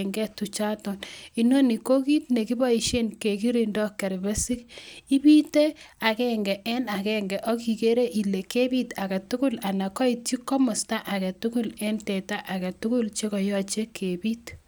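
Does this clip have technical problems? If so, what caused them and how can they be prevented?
No, nothing stood out as a technical problem on listening, so there is nothing here that needs preventing.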